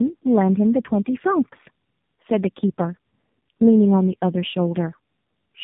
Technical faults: tandem speech coding

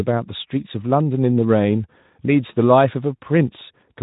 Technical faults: none

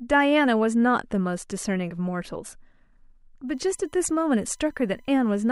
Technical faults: USB whine

